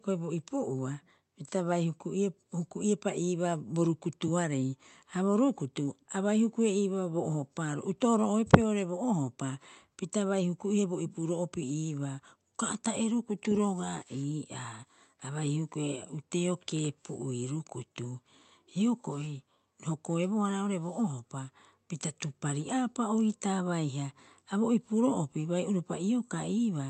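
Microphone overload hits this speech recording from 8.53 to 8.55 s. The peak is driven about 5 dB past the converter's ceiling, squaring off nearly a third of the samples in that stretch and leaving a brief harsh crackle, most likely from the input gain being set too high. Microphone volume stepped down follows at 8.55 s, with voice and background falling together by about 2 dB in a single step right after that distorted peak. The likely cause is the call software reacting to the clipping by lowering the device's input level. The audio reaches the listener through an Opus call path whose top end stops at around 8 kHz.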